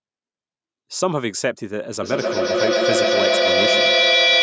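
From 2.02 s to the end of the clip, a feedback echo between two devices takes over: two devices on the same call share a room, so one loudspeaker replays what the other microphone sent, and that microphone captures it again, out of reach of either echo canceller. The speech returns roughly every 150 ms, each pass thinner and more ringing, and because the loop runs hot the repeats build up instead of fading, peaking about 6 dB above the speech itself, all within the call processing's 8 kHz band.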